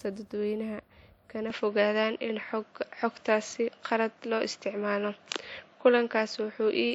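At 1.50 s the speech abruptly turns duller, with nothing above 7.6 kHz, a level shift of around 5 dB and a new noise floor roughly 45 dB down, with no gap at the change. This most likely reflects the input switching to a poorer device, which persists to the end.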